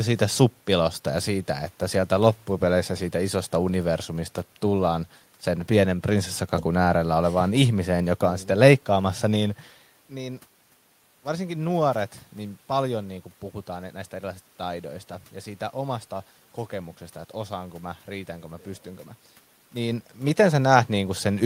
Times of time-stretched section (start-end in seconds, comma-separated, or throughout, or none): none